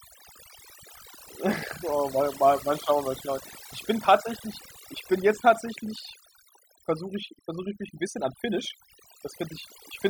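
Overdone noise removal runs through the whole recording, start to finish. A noise reduction stage was pushed too hard on a noisy source, so any frequency band sitting close to its noise estimate gets pulled down steeply or shut off entirely. The quieter components of the speech fall below that line and vanish with the noise. Between phrases the background collapses to near silence dotted with twinkling specks.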